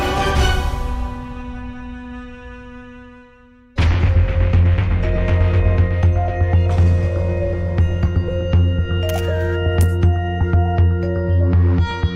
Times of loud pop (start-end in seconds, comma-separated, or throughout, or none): none